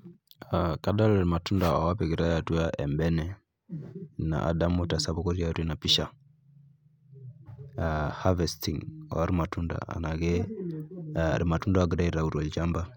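Speech, with one instance of compressed frames skipped at 5.16 s. Roughly 20 ms of audio is missing there, which points to compressed frames that were either absent from the file or rejected by the decoder as damaged. Playback jumps straight to the next good frame.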